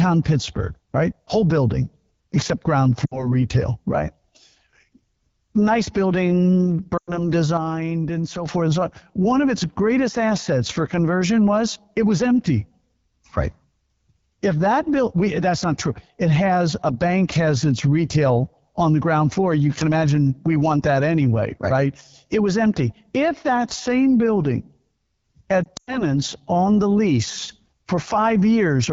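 The whole clip runs through the AMR wideband (HD Voice) codec at 8.85 kbit/s, one of its two lowest rates, so the speech has a constant rough, raspy edge. The band above 6.4 kHz is filled with shaped noise rather than real detail.

At 3.06 to 3.34 s there are lost AMR speech frames, about 60 ms of audio gone. The decoder holds the last good pitch and tract settings while fading them, so the sound smears briefly and then returns a bit rough. A longer gap follows at 6.97 to 7.29 s, right after "nice building", about 100 ms, which drops to near silence within two frames before recovering.

From 7.57 to 8.46 s, before "forth and so on", there's a sudden gain jump. Speech and background drop together by about 6 dB in one step, likely a gain setting applied without any ramp.

At 25.64 to 26.02 s more frames drop: 120 ms spread over 240 ms, with the longest run 100 ms, giving a stuttery warble that dips out. 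At 27.49 to 27.72 s, just after "on the lease", another gain jump pushes the level up by about 6 dB abruptly.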